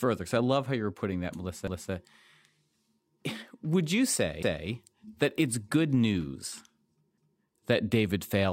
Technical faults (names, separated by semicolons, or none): overlapping chunks